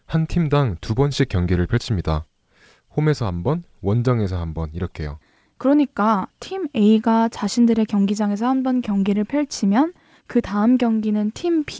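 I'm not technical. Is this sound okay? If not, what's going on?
No. There is clock drift between sender and receiver: the sending device's clock runs roughly 5 percent fast, so audio arrives a little quicker than your end plays it. Unlike packet loss, this causes no silent gaps or garbled bursts, just a steady push throughout the speech.

To keep up, the receiver makes repeated timing corrections from 0.07 s to the end, trimming tiny slices out to hold the pace near 105 percent. You may notice faint, unevenly spaced hiccups or a slightly rushed, unsteady rhythm, all tilting the same way. The call audio stops at about 8 kHz, as expected for this kind of call.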